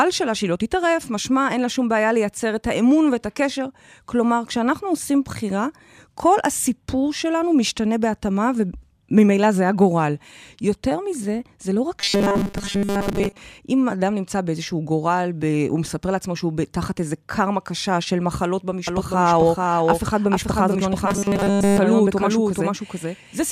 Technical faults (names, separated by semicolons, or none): robotic sound from repeated short buffers; doubled audio track